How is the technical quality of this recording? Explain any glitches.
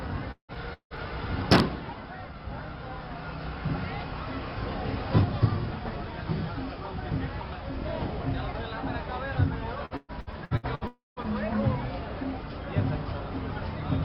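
The recording has two stretches of choppy, robotic audio and one short outage in which the sound drops out.

Repeated packet loss (robotic sound) occurs from 0.31 to 1.00 s and again from 9.85 to 10.84 s. The first stretch has four gaps, the longest 172 ms, and about half of it is concealed. The second has seven gaps, the longest 120 ms, with 42% concealed. Each hole is bridged by repeating the preceding sound, which gives a choppy, stuttering texture. On a spectrogram these appear as smeared, repeated blocks. The waveform shows abrupt joins.

Right after that, from 10.87 to 11.19 s, the audio breaks off for about 300 ms, likely a long network dropout. The last sound is stretched into a fading buzz or hiss, and then about 160 ms of silence follows before the audio resumes without the lost part. On a waveform this looks like a decaying tail that runs into a flat line. A spectrogram shows a blurred band that fades to a blank gap.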